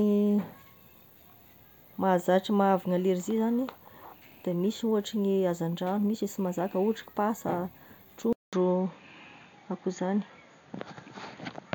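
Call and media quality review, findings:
Speech goes silent for 200 ms at 8.33 s, then returns dull and boxy to the end. Nothing above 6.9 kHz, level shifted by about 5 dB, new noise floor about 40 dB down. Likely cause: input switched to a poorer device, a second microphone or headset call profile. The silence gap plus changed noise floor and level at the same instant separate this from a codec bandwidth drop, which narrows the band without altering background or gain.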